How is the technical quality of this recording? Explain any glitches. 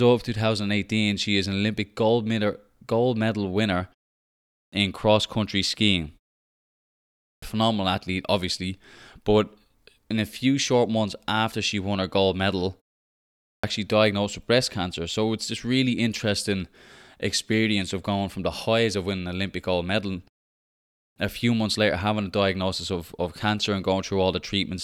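The recording has one recurring glitch: clipped start after a pause, at 4.2, 6.92, 13.08 and 20.63 s. Each time roughly half a second goes missing (about 0.50 to 0.55 s), for example between "medal gold medal winner" and "in cross country skiing", and between "won her gold medal" and "diagnosed with breast cancer". The output device seems to doze off during short gaps of 0.34 to 0.81 s and wakes too slowly, so speech lurches in abruptly with its opening chopped off. The pauses themselves go quiet, and the start of the speech after them is lost.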